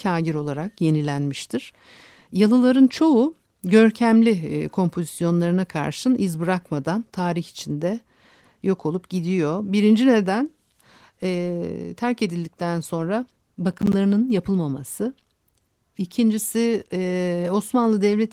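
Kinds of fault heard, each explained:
Processor overload crackle: after "terk edildikten sonra", 13.73 to 13.93 s, the processor misses a handful of buffer deadlines, each leaving a hard-edged silent gap. It sounds like gritty crackle, with flat waveform gaps around 10 ms wide and vertical broadband spectrogram stripes.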